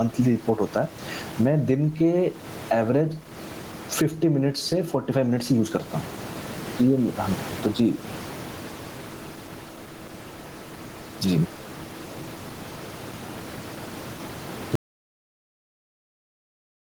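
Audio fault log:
Throughout, gain pumping: input gain likely set far too high, so a fast limiter clamps every loud moment, squashing loud and soft parts closer together, levels swinging around 15 dB.
14.75 s to end, audio dropout to silence: the input was likely lost while silence kept being written, so speech cuts off into dead silence, the room noise gone too.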